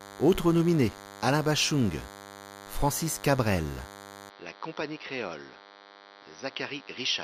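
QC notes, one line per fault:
Throughout: DECT cordless phone buzz. A nearby DECT handset or base sends a radio burst every 10 ms, and the audio circuit rectifies it. The result is a thin, steady buzz at 100 Hz with many harmonics, sitting about 20 dB below the speech.
4.30–7.24 s: input switched to a poorer device, likely a change of microphone or a headset call profile. With no gap at the switch, the speech drops about 10 dB, loses everything above 5.8 kHz and turns dull, and a new background noise appears about 30 dB down.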